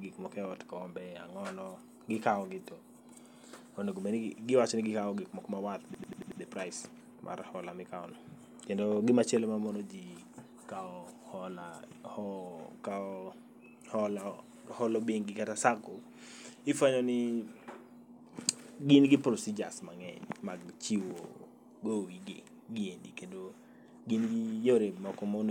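At 5.94 s the system froze while the sound hardware kept cycling through its ring buffer, producing a system hang loop that lasts until 6.41 s. A single 92.9 ms slice of the speech, which fits a 4096-sample buffer, repeats exactly five times at 10.8 Hz. That loop is long enough to come across as a rapid machine-gun stutter. When playback resumes, the speech carries on with essentially nothing missing.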